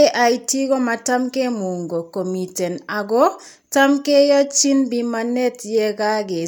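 Speech recording with no audible technical faults.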